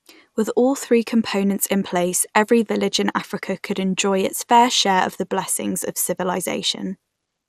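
Throughout the speech, the sound is dull and carries a gurgling, granular grit. Nothing reaches above 15.9 kHz. This is likely MP2 compression at a low bitrate, near 80 kbps. Upper sub-bands flicker off and the remaining bands are coarsely quantised.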